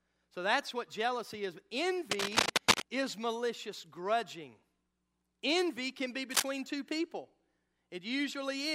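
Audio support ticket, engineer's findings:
Scratchy, rustling noise bursts over speech, 2.11–2.82 s and 6.30–6.50 s, roughly 5 dB above it. Cable scratch noise, likely a worn connector shifting contact resistance.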